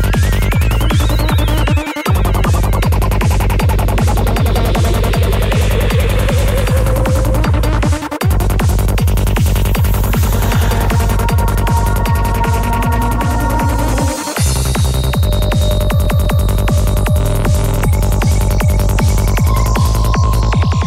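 At 16.05 s the audio catches on a CD stuck on one turn. The laser jumps back one track at the same spot on the disc. A 196 ms fragment plays twice in a row, with a brief mute at each jump. The even stutter ends by 16.45 s.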